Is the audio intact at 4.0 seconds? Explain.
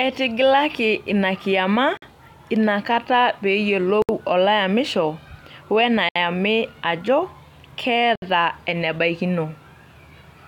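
No. At 4.02 to 4.09 s there is a gap at a join of encoded pieces: a roughly 67 ms gap where separately encoded segments were spliced without trimming encoder delay and last-frame padding. The speech drops out abruptly, edges smeared, then resumes where it stopped.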